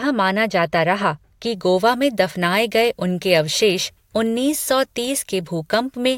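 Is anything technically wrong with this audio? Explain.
Yes. From 1.55 s, just after "रहा कि", to the end, the speech turns thin, bright and hissy: pre-emphasis left on, treble boosted about 10 dB at 10 kHz, consistent with a 50 µs FM curve never de-emphasised.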